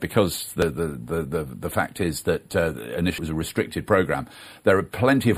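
At 0.62 s and again at 3.18 s there's a quick blip from damaged data in a compressed stream, where corrupted bytes make the decoder lose sync and briefly spit out garbage before catching up.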